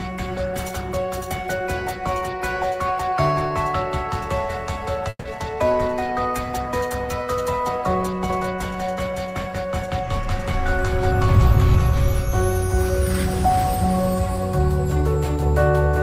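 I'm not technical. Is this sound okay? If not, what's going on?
No. There are three separate problems.

At 5.09 s the sound briefly stalls. For about 0.16 s the last bit of audio is stretched into a fading buzz that ends in a short silence, then the sound carries on exactly where it left off. This is a call audio freeze, likely caused by packets arriving late, so the receiver ran out of audio and had to fill the wait. Nothing is lost, but everything afterwards runs slightly later.

From 8.30 s to the very end, you hear everything twice. A second, slightly quieter copy trails about 0.4 s behind the first, like a flat, clean echo with no room sound, and it starts suddenly rather than fading in. This is a doubled audio track, likely the same sound being picked up a second time through a slower route and mixed back in.

Between 14.36 and 15.46 s the sound hurries. It runs about 9% faster without getting higher in pitch, because tiny slivers adding up to roughly a tenth of a second are cut out. 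This is a jitter buffer speed-up: the receiver had built up too much waiting audio and trimmed it to catch up.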